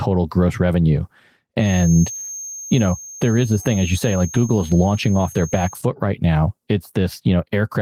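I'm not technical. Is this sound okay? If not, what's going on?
No. From 1.56 to 5.82 seconds a thin, steady, high-pitched whistle, at about 6.4 kHz, sits quietly behind the speech and swells and fades slowly in loudness. This is a feedback whistle. It is likely caused by sound from a loudspeaker leaking back into the microphone, so the system keeps re-amplifying one tone. The loop sits just at the edge, so the tone hangs on instead of growing into a loud howl.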